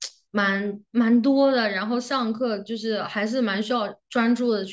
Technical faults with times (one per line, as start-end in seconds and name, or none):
none